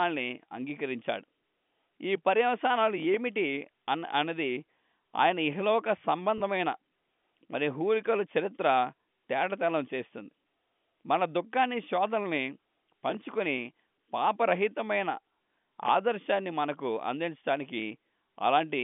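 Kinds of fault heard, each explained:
Packet loss with pitch repetition: at 6.38 s, 20 ms of speech is missing, which points to one lost packet. The receiver fills it by repeating the last pitch period, so you hear a brief held buzz rather than the silent gap of a plain dropout.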